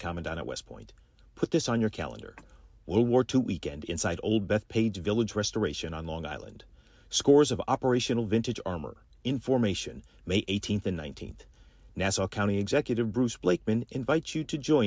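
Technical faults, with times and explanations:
No technical faults can be heard in this speech recording, and the signal holds steady without any dropout, clipping, glitch or interruption.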